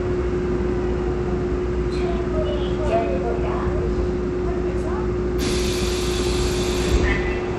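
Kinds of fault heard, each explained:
Bluetooth SBC compression: likely a low-rate SBC link, which fits roughly 96 kbps, starving the upper sub-bands; treble flickers, gritty noise rides along, nothing above 15.8 kHz.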